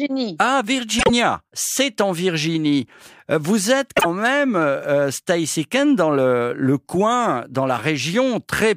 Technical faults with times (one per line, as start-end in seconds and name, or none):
0.99-1.10 frames out of order
3.96-4.05 frames out of order